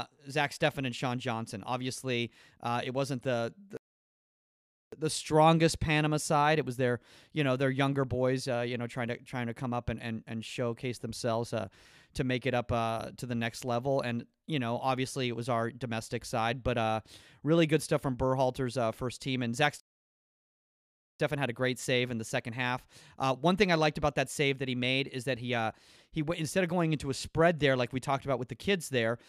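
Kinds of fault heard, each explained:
Playback stall: the speech cuts out mid-flow and falls completely silent twice, from 3.77 to 4.92 s for about 1.15 s and from 19.80 to 21.20 s for about 1.40 s, before carrying on. Each gap is a dead stop rather than a fade or a glitch. The likely cause is the player running short of data, or its playback thread being held up, so nothing reaches the output until it recovers.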